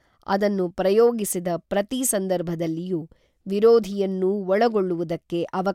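No technical faults can be heard anywhere in the speech. No moment stands out as needing a time or an explanation of something gone wrong.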